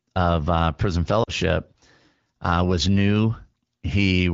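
At about 1.23 to 1.31 s there's a short patch of lost AMR speech frames, roughly 40 ms, which fits two dropped 20 ms frames. The decoder fills the gap by stretching the previous sound with falling gain over the light, wideband AMR-WB coding, so you hear a quick smeared dip before the voice comes back weak or rough for a moment.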